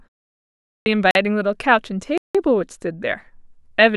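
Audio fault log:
0.55–0.86 s, clipped start after a pause: after about 0.55 s of silence, the output device had to wake or relock before passing sound. The first 310 ms of speech is lost, so the talker comes in abruptly, missing the opening sounds.
1.11–1.15 s and 2.18–2.35 s, block of digital silence: the output buffer was likely not filled in time and played zeros. The cuts to and from silence have no fade. The first gap is 43 ms, a short hole, and fits a 1024-sample block. The second is 171 ms, an audible hole, and fits a 4096-sample block.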